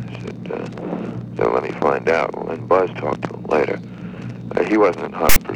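At 5.29 s, running to 5.36 s, a short stretch of file tags played as audio appears near the end of the clip. Here a block of text metadata has been decoded as if it were sample data, so the character bytes become waveform values. Because text bytes cluster in a narrow numeric range, the result is a loud, harsh rasp with an offset to one side, starting and stopping abruptly with hard edges for roughly 70 ms.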